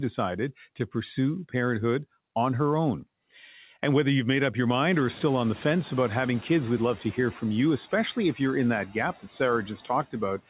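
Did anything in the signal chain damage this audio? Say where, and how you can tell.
Yes. In call processing, room noise surges near 5 s and sinks about 5 dB by 7.06 s: the noise suppressor catching up, its estimate lagging from 4.93 s.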